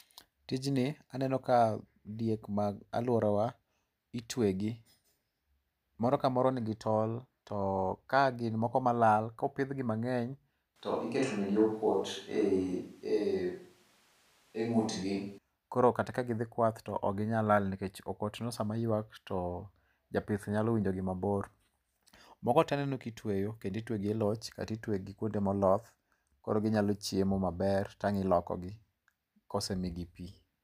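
The close microphone likely dropped out from 10.76 s to 15.38 s, so the speech was picked up by a distant microphone instead. The switch to a distant microphone makes the voice abruptly roomy, hollow and thin, with room noise roughly 35 dB below it, though the level barely changes.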